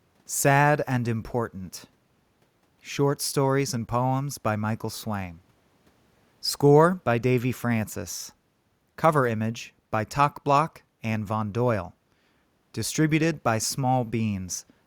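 A speech recording, with nothing technically wrong with it.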